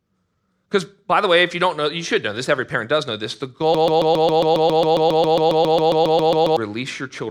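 At 3.75 s the speech sticks on a 136 ms fragment that repeats exactly, back to back, 21 times until 6.57 s: a broken-record loop. The player or stream likely stalled and kept resending its last buffered piece, so the intervening speech is lost.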